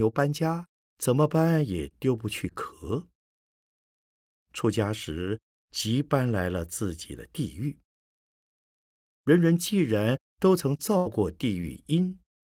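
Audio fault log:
10.97–11.07 s, burst of packet loss: about 80 ms went missing; the decoder holds and fades the last sound, appearing as a smeared, decaying band before the waveform jumps ahead.
11.05, 11.61, 11.73 s, lost packet rebuilt from error correction: three 20 ms frames played from a low-bitrate backup copy; no gap, but brief rough, noisy patches.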